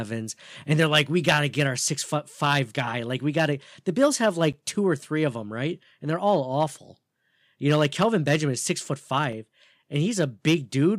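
At 4.53 s there's a block of digital silence about 10 ms long, and another at 9.33 s of about 5 ms. In both, the speech drops straight to silence and comes straight back with no fade, and you hear a quick tick.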